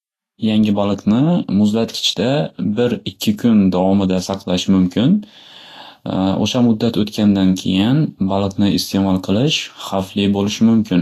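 Speech with plainly audible Vorbis compression throughout: a lowered treble cut-off and grainy, hissy treble, likely from a low-bitrate encode of around 35 kbps.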